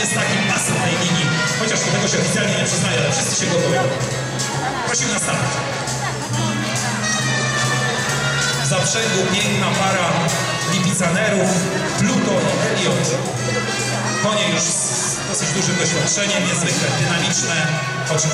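No technical faults can be heard anywhere in this clip. The audio holds steady throughout, with no audible breaks or disturbances at any point.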